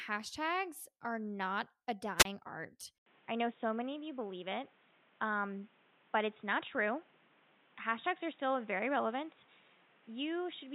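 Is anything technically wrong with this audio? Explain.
Yes, two faults are audible.

A wireless microphone squelch dropout occurs from 2.18 to 2.25 s, just after "are not a". The FM radio signal fades, hiss rises briefly, and the receiver's squelch mutes the output for about 28 ms before the speech returns.

At 2.98 s the input appears switched to a poorer device, likely a change of microphone mid-recording. There is an 80 ms silence at the switch, then nothing above 3.8 kHz, so the speech turns dull and boxy, with new background noise roughly 30 dB below it and no real level change.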